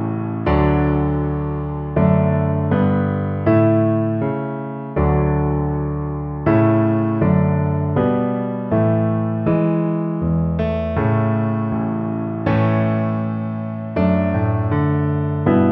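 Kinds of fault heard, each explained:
Nothing stood out on listening to this clip.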